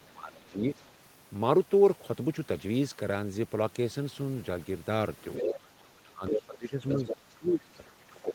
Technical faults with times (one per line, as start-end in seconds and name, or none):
0.00-0.65 speech suppressed in double talk
5.34-5.59 other side's voice leaking through
5.41-8.34 speech suppressed in double talk
6.89-7.14 other side's voice leaking through
7.75-7.91 other side's voice leaking through